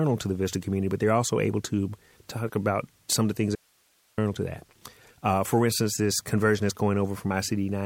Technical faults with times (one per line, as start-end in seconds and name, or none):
3.55-4.18 audio dropout to a faint residue